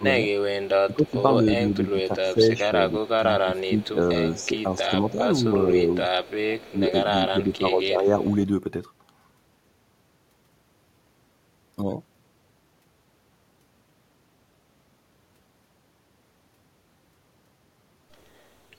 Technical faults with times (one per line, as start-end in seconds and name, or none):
0.00-8.17 speech suppressed in double talk
1.19-1.90 echo leak
3.02-8.36 echo leak